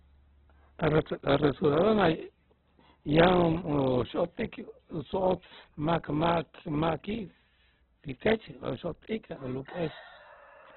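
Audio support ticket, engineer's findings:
Opus compression, whole clip. Speech muffled and narrowband, with nothing above 4.4 kHz. Spectrogram shows a hard, flat ceiling at that line and an empty band above it. Below, grainy noise-like fill instead of crisp harmonic striations. Rough, gritty vowels. Likely cause is the Opus encoder starved of bits, in a way that fits around 8 kbps in music (CELT) mode. Band energies are kept, but fine detail is replaced by folded or noise fill.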